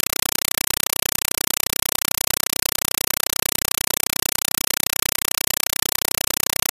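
From start to finish, the speech is replaced by harsh, very loud static. It is a compressed stream played as audio. An AC-3 bitstream reached the output as if it were plain samples, with no decoder in the path. Each coded frame becomes a burst of noise about 5.33 ms long, then silence from the padding. The bursts repeat 31.25 times a second, giving a rapid chatter. The burst length fits a stream of roughly 256 kbps.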